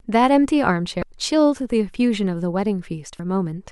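Two brief glitches cut into the speech, from 1.00 to 1.03 s and from 3.16 to 3.20 s. Both come from damaged data in a compressed stream: corrupted frames are misread by the decoder, which loses sync and hunts for the next frame header.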